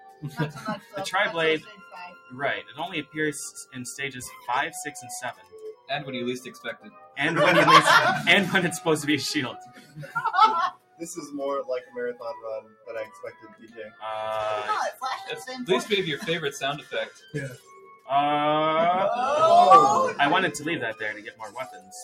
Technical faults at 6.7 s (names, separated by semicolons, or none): noise suppressor applied to music or sounds; sound cut by the noise suppressor